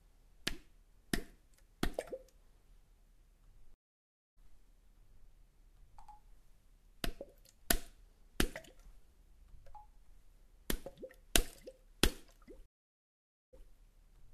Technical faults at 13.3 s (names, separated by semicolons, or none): stream reconnect